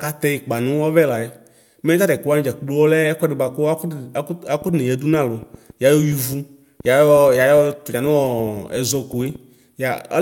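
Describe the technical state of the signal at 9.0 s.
Irregular popping ticks, about 5.5 per second and roughly as loud as the speech itself, run through 9.0 s: a train of clicks spanning 4.62 to 9.36 s, likely from interference or a faulty connection.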